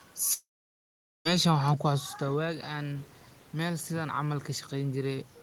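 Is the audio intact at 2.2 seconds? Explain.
No. At 2.2 seconds the automatic gain is rising: from 1.62 s to the end of the clip, the gain control reacts to an input that fell by about 11 dB, and the talker also moves at the microphone around 2 s. It pushes its gain up gradually rather than at once, so the speech climbs back in level over the following seconds, and the room noise swells right along with it instead of staying steady beneath the voice.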